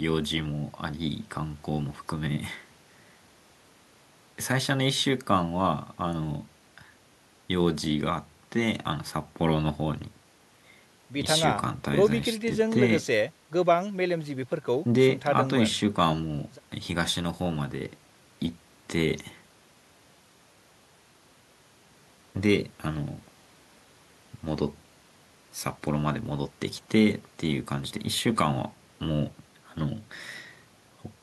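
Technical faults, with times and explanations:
No technical faults are present in this clip.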